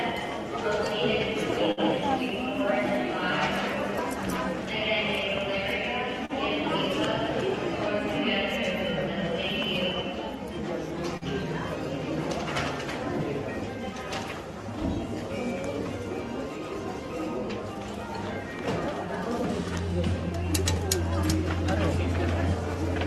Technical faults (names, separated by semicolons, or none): short stall from a late packet; short concealed packet loss